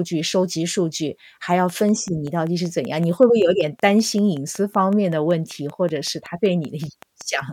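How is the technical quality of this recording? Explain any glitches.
The recording is marred by a train of clicks running from 1.70 s to 7.41 s. Around thirty similar pulses arrive at a steady 5.26 per second, ticking about as loud as the speech and continuing through pauses. Likely interference or a faulty connection or power supply. The even spacing and uniform shape set it apart from random crackle.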